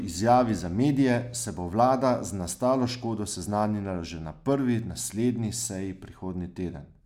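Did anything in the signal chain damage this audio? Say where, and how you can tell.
No, nothing in the signal chain damaged this speech.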